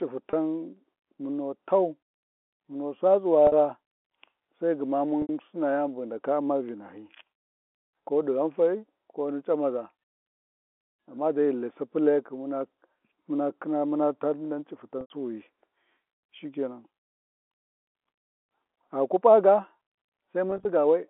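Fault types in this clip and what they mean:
packet loss with pitch repetition: Packets were lost, and the receiver looped the last pitch period to bridge each gap. The 30 and 50 ms losses sound like a held, buzzy note, the unbroken 70 and 90 ms gaps fade toward silence, and the final loss breaks into brief dropouts spread across 140 ms.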